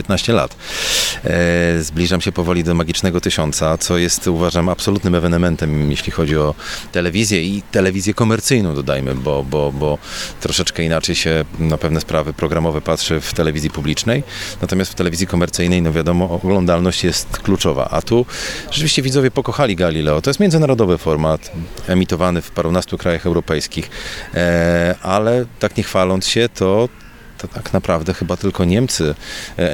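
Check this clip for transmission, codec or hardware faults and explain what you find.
Two sharp clicks stand out, at 0.82 s and 6.21 s. Both are likely dropped samples, where just a handful of samples, a tiny fraction of a millisecond, went missing, so the waveform jumps abruptly to a later value. Nothing audible is lost, but each jump lands as a single crisp tick.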